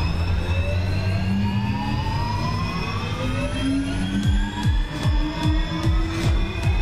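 No technical faults are audible in this audio.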